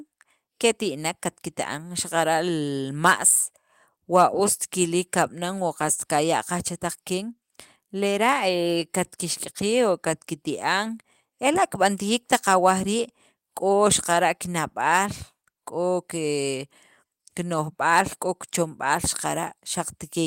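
Listening closely to the speech recording, nothing stood out as a technical fault at any point.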